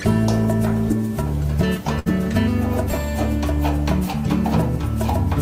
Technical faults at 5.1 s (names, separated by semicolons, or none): none